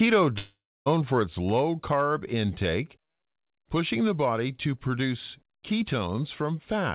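Speech, carried over a narrowband call path with nothing above 4 kHz, which fits a G.711 telephone codec. From 0.38 to 0.88 s the sound breaks off. The last moment is drawn out into a buzzy tail that fades, then about 0.27 s of near silence follows, and speech resumes at "for its low carb" with roughly half a second simply gone. This is a long network dropout, likely from packets failing to arrive. The receiver covered the gap with synthesized sound, ran out of material to extend, and went quiet until real audio returned.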